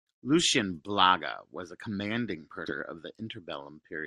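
At 2.67 to 2.72 s there is a stream segment skipped. What most likely happened is that one segment of the segmented stream failed to load, and the player moved straight on to the next rather than waiting or retrying. The result is an abrupt jump in the speech: the delivery lurches ahead at that point, so a stretch of the programme is simply absent, and the join is marked by a small blip.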